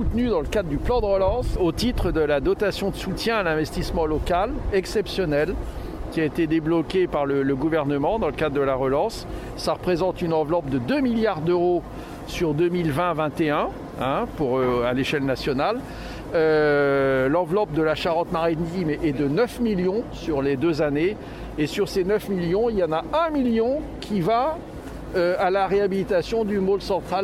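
No technical faults are audible.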